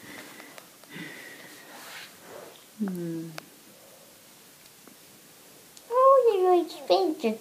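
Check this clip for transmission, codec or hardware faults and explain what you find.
One fault is audible: a repeated buffer at 4.65 s. Fresh audio arrived late, so the device replayed its last block twice more. That block lasts about 2.9 ms, which fits a 128-sample buffer. The three hard-joined copies fuse into a brief buzzy click, not a silent gap, and a few milliseconds of audio go missing.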